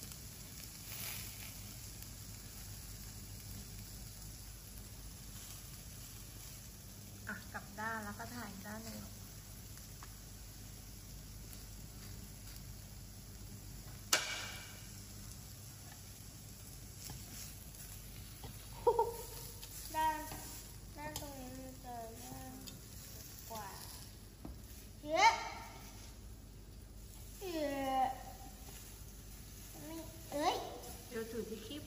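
No technical faults occur at any point in the audio, so there is nothing to describe in time order.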